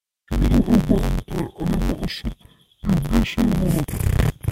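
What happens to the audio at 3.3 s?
At 3.3 s, as throughout the clip, interleaved audio is read as planar: each 10.88 ms block of alternating left-right samples is split into halves played as separate channels at half speed. The speech sounds dull and robotic, buzzing at 91.9 Hz without a clear octave drop.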